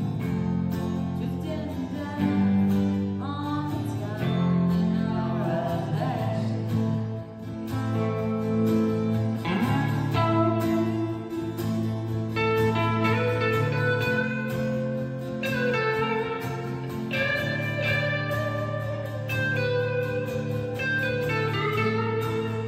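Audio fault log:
Nothing to log here, there's no problem to be heard anywhere in this one.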